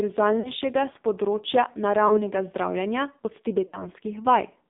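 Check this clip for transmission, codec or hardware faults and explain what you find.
Two faults are present: heavy narrowband mobile codec damage throughout, and three dropouts from lost speech frames.

AMR narrowband mobile codec, throughout: the sound is confined to roughly 200 Hz to 3.7 kHz and has a buzzy, synthetic texture, which fits AMR-NB at a low mode near 5.9 kbps. A spectrogram shows a hard ceiling below 4 kHz with smeared harmonics.

Lost AMR speech frames, at 0.40–0.51 s (before "s področja"), 2.08–2.29 s (between "s področja" and "zdravljenja od") and 3.68–3.87 s (after "zdravljenja od"): the decoder repeats its last pitch and vocal-tract settings at falling gain, so the sound stretches, warbles and fades. The waveform shows tapering envelopes, consistent with one or two missing 20 ms frames.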